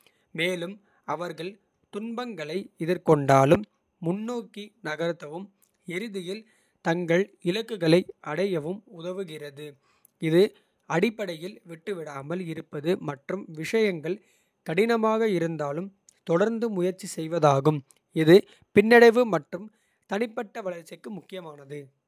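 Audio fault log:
No fault is heard in this speech clip.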